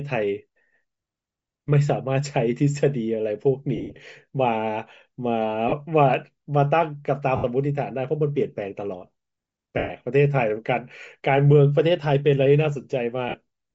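Throughout the speech there is a breathy, grainy edge on the upper frequencies, with the top of the spectrum thinned out and replaced by hiss-like texture. This likely comes from Bluetooth LC3 compression at a rate that fits about 32 kbps with 10 ms frames. What sets it apart from MP3 or AAC damage is this noise-filled treble rather than swirling or watery artefacts, with the damage staying plainly audible the whole way through.

Lost LE Audio frames break in at 3.76 s, 5.69 s, 7.36 s, 9.78 s and 13.29 s. The first spans 3.76 to 3.96 s, with about 150 ms missing in scattered pieces and the longest run around a tenth of a second. The others last 30 ms, 80 ms, 120 ms and 50 ms. During each gap the decoder repeats the last spectrum with scrambled phase, so the sound turns into a brief noisy smear instead of cutting to hard silence or clicking like a plain dropout.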